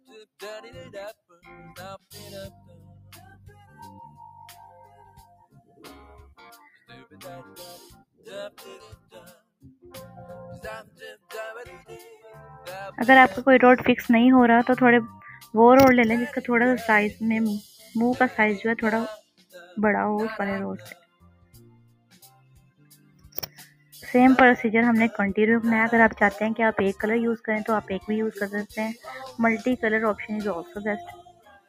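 A noise suppressor applied to music or sounds, one tuned for speech, runs across the whole clip and treats sustained, steady material as noise. Its gain swings by something like 15 dB as it decides what to keep, so level pumps and thins between transients. On a waveform the envelope looks nervous, with attacks standing tall and the held portions sagging beneath them. A spectrogram shows sustained partials and reverberant tails fading in blotchy, time-varying patches rather than decaying smoothly.

Specific stretches of sound are cut by the noise suppressor more than the rest. These dips occur at 1.29–1.47 s (about 12 dB), 2.0–9.92 s (about 19 dB, affecting most of that span), 10.83–11.89 s (about 17 dB), 17.78–17.95 s (about 6 dB), 19.2–19.75 s (about 17 dB), 20.91–24.05 s (about 19 dB, for roughly three seconds) and 30.67 s to the end (about 17 dB). In each, the steady or decaying energy sinks while onsets survive. 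The spectrogram shows the energy there going dark and hollow, and the waveform pinches inward.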